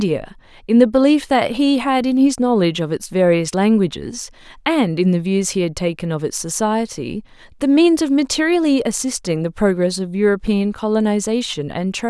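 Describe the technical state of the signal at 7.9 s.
At 7.9 s the speech signal is intact, with no dropout, clipping, distortion or other fault to be heard.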